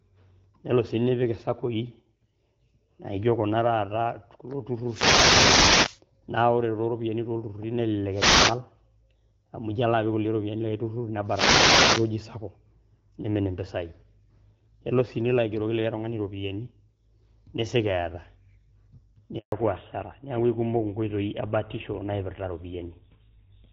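Reflections of the radio signal from an analogue FM wireless microphone cancel each other, so the signal fades and the receiver's own noise rises into the speech. These wireless microphone noise hits sound like short swishes or bursts of static over the voice, at 4.84 to 6.01 s, 8.11 to 8.60 s and 11.24 to 12.12 s. The first and last last about a second, and the middle one is about half that.

At 19.38 s the call is handed from one network to another and no speech frames arrive during the switch. This handover gap cuts the voice off for 140 ms, until 19.52 s. The voice drops away abruptly into silence, and whatever was said in that moment is lost.

When the new link starts at 19.52 s, the call has fallen back to narrowband. Before that point the voice is clear and only lightly coloured, which fits AMR wideband (HD Voice) coding at around 12.65 kbit/s. From 19.52 s to the end, nothing above 4 kHz remains. 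The voice sounds duller and rougher, and the crisp edge on sibilants is gone. That change points to an older narrowband codec such as GSM full rate.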